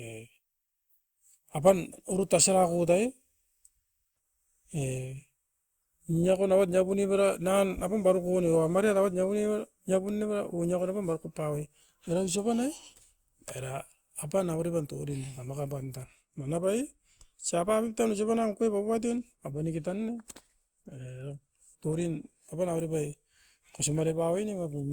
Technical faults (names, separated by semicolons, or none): generation loss